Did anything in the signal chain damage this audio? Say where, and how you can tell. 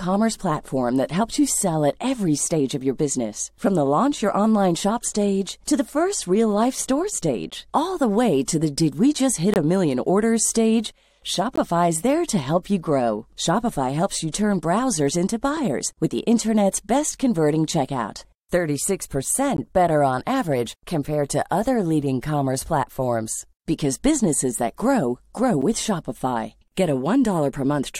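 Yes, at the streaming stage: a gap between stream segments, heard as hard-edged silent holes at 7.50, 9.54 (between "did we just hit" and "a million orders stage"), 11.56, 15.57, 19.57 and 25.62 s. They fall on two-second boundaries, where mismatched segment timestamps leave 3 to 22 ms that the player fills with silence.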